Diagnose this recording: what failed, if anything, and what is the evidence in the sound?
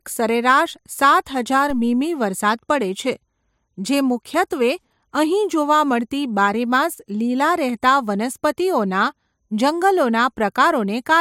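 There's a DC step at 1.70 s in this speech recording. It's heard as a single low thump while the talking carries on unchanged. The zero line of the waveform jumps at that instant, which points at the front end: either the converter recalibrating or an input carrying an offset being switched in. The offset doesn't hold; it drains back toward zero, the way a high-pass around 2 Hz would pull it, so you get the thump without a lasting shift.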